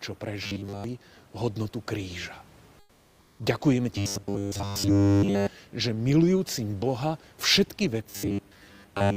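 From 0.43 to 0.84 s, robotic sound from repeated short buffers: a rigid 100 Hz buzz, likely from looping roughly 10 ms chunks, replaces most of the speech. From 2.79 to 3.39 s, comfort noise in place of the background: the room noise, about 35 dB below the speech, gives way to steady, featureless noise about 6 dB quieter, likely from discontinuous transmission of the Opus DTX kind. The same 100 Hz robotic buzz then returns, covering all of the speech from 3.98 to 5.47 s and most of it from 8.09 s to the end.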